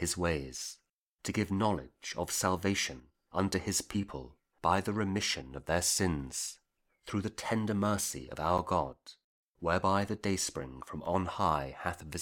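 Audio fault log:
3.00–3.15 s and 8.93–9.43 s, one channel drops out: the level dips abruptly by about 6 dB and recovers, likely one stereo side lost before the mono sum.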